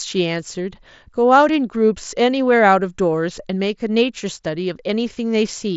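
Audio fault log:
No faults are present; the speech runs over a Bluetooth mSBC headset codec link, with content reaching up to about 7.7 kHz and nothing above it.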